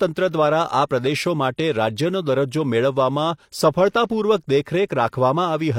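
It's a speech clip with pre-echo from 0.87 to 0.91 s: about 40 ms of hiss ahead of a sharp attack, as the transform codec's block noise smears that attack.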